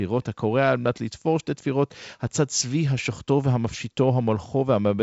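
No faults found in the speech; the band stops near 7.7 kHz with the light upper-band hiss typical of G.722 wideband telephone coding, a slightly noisier lower band pointing to the 56 kbit/s mode.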